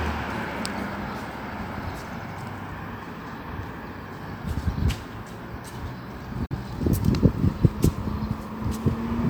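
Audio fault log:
6.46–6.55 s, digital broadcast dropout: the sound fades out over 8 ms into a brief hole. Roughly 43 ms is lost, consistent with the receiver muting one bad frame.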